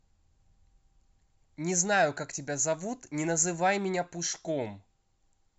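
Nothing stood out on listening to this speech clip.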